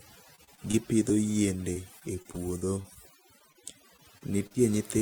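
A noise reduction stage was pushed far too hard across the whole recording, so this is overdone noise removal. Any frequency band sitting close to the tool's noise estimate gets pulled down or shut off, and the quieter parts of the speech are cut along with the noise. The pauses drop to near silence dotted with twinkling specks.

From 0.35 to 1.12 s the stream suffers repeated packet loss, heard as robotic sound. Audio kept arriving late or not at all, and each hole was patched by extending the last sound before the next one hit. Roughly 107 ms of audio in this stretch is made-up fill and about 60 ms is simply missing, with the longest hole around 30 ms. The speech turns choppy, with fragments dropped.

The same robotic breakup returns from 1.73 to 2.97 s. About 120 ms is concealed, another 120 ms is lost outright, and the longest gap is near 25 ms.

At 3.52 to 3.57 s there is a short concealed packet loss. 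Only a few hundredths of a second failed to reach the decoder in time, and the receiver carried the previous sound forward before blending back into the real signal. It is heard as a brief smear or wobble, and a short consonant can drop out.

From 3.97 to 4.56 s the repeated packet loss comes back. About 98 ms is filled in and about 60 ms is missing, with the longest hole near 39 ms.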